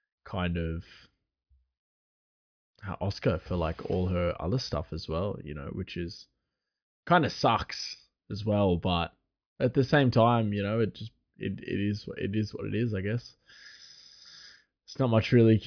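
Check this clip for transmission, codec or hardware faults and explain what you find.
No faults can be heard anywhere in this speech.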